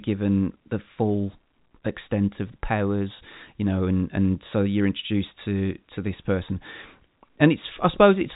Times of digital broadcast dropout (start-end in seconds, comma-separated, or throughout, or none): none